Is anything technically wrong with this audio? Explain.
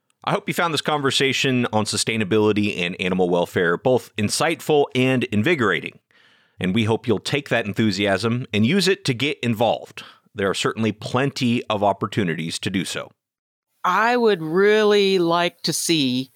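No, nothing in this speech recording stood out as a technical problem on listening.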